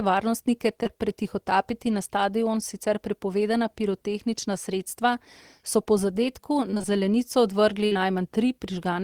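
Short concealed packet loss hits twice back to back, at 0.83 to 0.87 s and 0.87 to 0.91 s, just before "pretihotapiti na stadion sicer". Each time about 20 ms of speech arrived too late, and the decoder extended the preceding sound before blending back in. The result is a brief smear where the sound runs on slightly.

Repeated packet loss (robotic sound) follows from 6.71 to 6.90 s. Four gaps of up to 20 ms each, 80 ms in total, were patched one after another, so concealment fills nearly half that stretch. The speech turns choppy, with small pieces missing.

A burst of packet loss comes at 7.86 to 7.99 s, right after "zelenico odvrgli". Some 60 ms never arrived in time. The receiver held the last sound and let it fade, producing a short buzz or hiss before the speech resumes further on. Within it, at 7.93 to 7.97 s, a further short concealed packet loss of 20 ms adds another patched hole.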